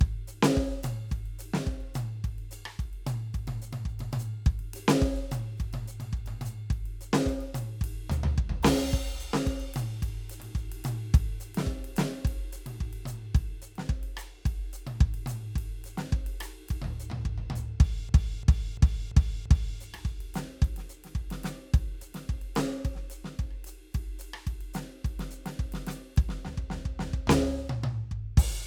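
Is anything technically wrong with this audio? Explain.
Yes. From 18.09 to 19.80 s the music hits a system hang loop: the computer or its audio driver stalled while the sound hardware kept replaying the same stretch of its ring buffer. A 341 ms slice, which fits a 16384-sample buffer, repeats exactly five times at about 2.9 Hz. Because the loop is that long, it comes across as a rhythmic, machine-gun stutter rather than a buzz, with essentially no audio lost once playback resumes.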